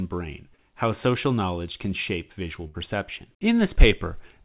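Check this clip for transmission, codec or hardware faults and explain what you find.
Two transmission faults show up in this speech, both packet losses on the call path. The band stops at 4 kHz, which fits a 64 kbps G.711 mu-law narrowband link.

Short concealed packet loss, 0.56 to 0.60 s: about 20 ms of audio never arrived in time, so the receiver improvised roughly 16 ms by extending the preceding sound, following its pitch if voiced or as shaped noise if not, then crossfading back into real audio. It comes across as a brief smear or wobble, with a fragment of the speech simply gone.

Burst of packet loss, 2.68 to 2.76 s: several consecutive packets, about 60 ms in total, were lost or arrived too late to play. The receiver stretched the last sound across roughly 65 ms while turning it down as the gap continued, giving a held, fading buzz or hiss. Speech then resumes further along, with the stretch in between missing outright.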